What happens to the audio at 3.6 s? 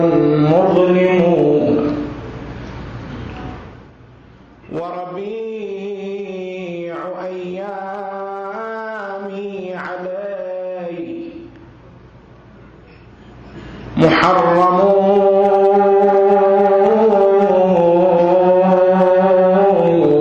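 A fast ticking, zipping texture rides on the sound from 3.54 to 3.96 s as the level drops by roughly 15 dB. This is zipper noise: the gain falls in 1 dB steps, about fifty per second, with no smoothing, so each jump clicks.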